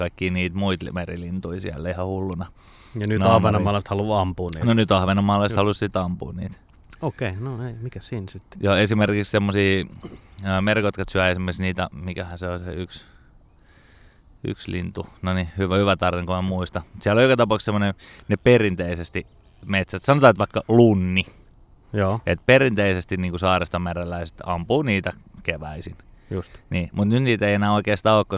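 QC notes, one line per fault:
No faults found anywhere in the speech. Nothing in it needs a flag.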